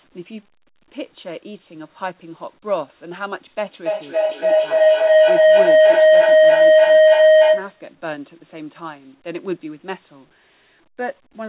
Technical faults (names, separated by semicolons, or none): feedback howl